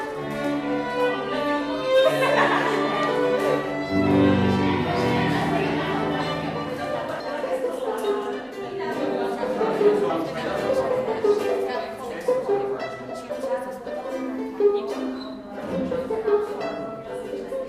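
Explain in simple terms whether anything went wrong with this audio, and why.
Something did go wrong, right at 13.30 s: compressed frames skipped. The file stores audio in small chunks, and here a couple of them never got played, either because they were missing or because the decoder rejected them as damaged. The sound just jumps forward by about 70 ms, which fits two chunks of 32 ms each. At that join you may hear a short blip or a click, depending on how the file was compressed.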